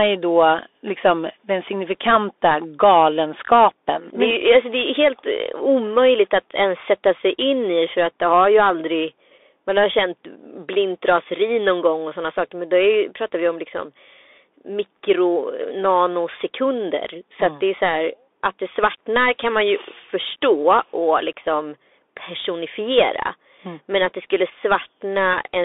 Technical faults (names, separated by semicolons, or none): Bluetooth CVSD headset codec; Bluetooth headset packet repeated